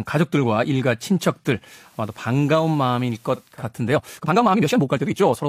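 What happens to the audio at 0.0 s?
Nothing goes wrong at 0.0 s; the speech starts cleanly there with no dropout, click or distortion.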